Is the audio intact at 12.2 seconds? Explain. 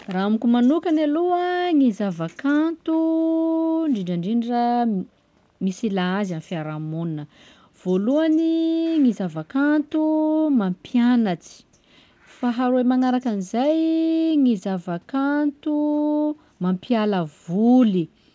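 Yes, the speech at 12.2 seconds is intact, carried cleanly through the WebRTC call path with its audio band ending around 8 kHz.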